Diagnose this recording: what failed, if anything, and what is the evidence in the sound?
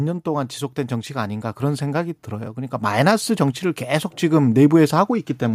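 The call-processing stage shows automatic gain rising. From 0.23 s to 3.67 s the speech and the background swell together by about 7 dB. The gain control judged the input too quiet and raised its gain slowly, so the level climbs steadily over those three-plus seconds.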